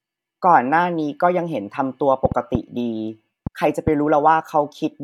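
From 2.25 s to 3.89 s there's a train of clicks: around five sharp pops at roughly 2.5 per second, spaced unevenly rather than on a steady beat. Each has much the same shape, and they sit well above the speech, somewhere near 15 dB louder, so they tick through clearly, even in the gaps. The likely culprit is interference from nearby gear or a faulty connection or power supply throwing short pulses into the signal.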